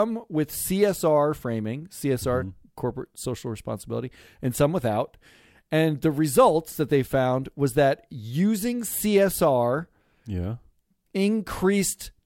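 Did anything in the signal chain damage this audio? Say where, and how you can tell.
No, I can't hear anything in this speech recording that points to damage at any stage of the signal chain, so there's nothing to pin on the wiring, conversion, processing or playback.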